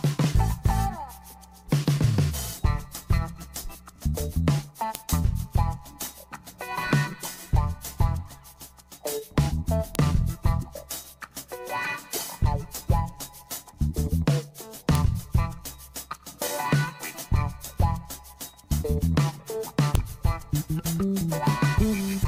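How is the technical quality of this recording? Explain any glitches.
Four sharp clicks mar the recording, at 4.95, 9.95, 14.95 and 19.95 s. They are a file header played as audio: header bytes left in at each join of 5-second pieces, showing as thin full-height vertical spikes.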